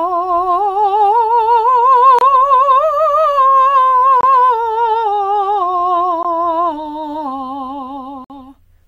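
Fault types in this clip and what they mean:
Gap between stream segments: The music plays in segments about 2 s long, and the time stamps of adjacent segments fail to meet. The player fills each hole with silence, so the music drops out with hard edges. This happens at 2.19 to 2.21 s, 4.21 to 4.23 s, 6.23 s and 8.24 to 8.30 s. The holes last about 25, 24, 17 and 55 ms. Nothing is lost. The music resumes where it stopped.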